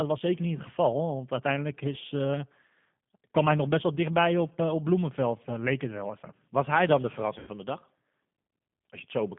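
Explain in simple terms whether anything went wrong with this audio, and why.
Yes, two things went wrong. Throughout, the speech passed through the G.729 codec, which rebuilds it from a simplified model and drops everything above about 3.5 kHz, so it sounds muffled, rough and slightly synthetic. At 7.39 to 7.50 s, just after "hij dan de" and before "van de dag", about 80 ms of audio was lost in transit. This is VoIP packet loss concealed by the speech codec: the decoder stretched the last sound to fill the gap and let it fade.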